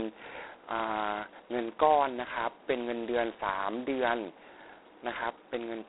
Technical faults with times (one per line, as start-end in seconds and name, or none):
0.00-5.89 G.726 ADPCM